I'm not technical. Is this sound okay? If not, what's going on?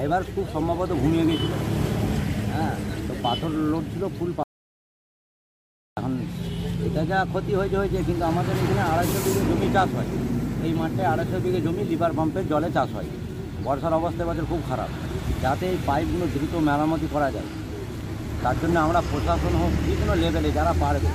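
No. At 4.43 seconds the sound suddenly cuts out mid-flow and comes back at 5.97 seconds. For about one and a half seconds there is dead silence, not even the faint background hum of the room. This is an audio dropout to silence. The likely cause is that the recording briefly lost its input, perhaps from a loose connection or an accidental mute, while the recorder kept running, so whatever happened in that gap is gone.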